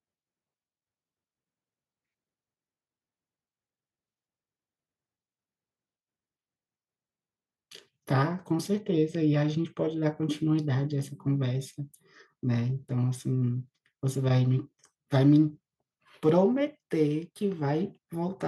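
No technical faults can be heard anywhere in the speech.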